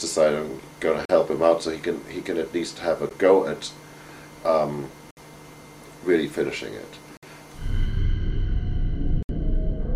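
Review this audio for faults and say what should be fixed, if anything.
Gaps between stream segments: the time stamps of successive 2 s segments leave small gaps that the player fills with silence. Hard-edged holes interrupt the sound at 1.05–1.10 s, 3.09 s, 5.11–5.17 s, 7.17–7.23 s and 9.23–9.29 s. Each lasts 13 to 65 ms, and no audio is lost. To prevent this, align segment time stamps so each segment begins exactly where the previous one ends.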